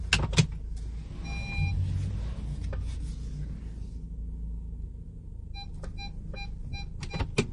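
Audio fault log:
throughout, MP3 compression: The encoder likely ran short of bits, and the damage fits a low MP3 bitrate around 40 kbps. To save bits it drops everything above about 10.6 kHz and zeroes weak frequency lines, which then blink on and off between frames. The result is plainly audible: a dull top end with no air, and a watery, swirling texture where detail keeps flickering in and out.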